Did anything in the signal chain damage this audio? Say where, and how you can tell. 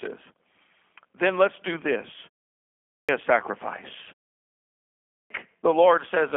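Yes. The codec stage left G.729 damage throughout. The sound is rough and synthetic, and nothing above 3.5 kHz survives. That fits an 8 kbit/s voice link.

The playback device causes a clipped start after a pause at 2.82 s and 5.04 s. About 0.26 s is swallowed each time, once between "let's do this" and "a sacrifice". The output wakes late after silence.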